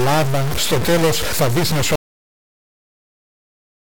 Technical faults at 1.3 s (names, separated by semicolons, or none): stuck bit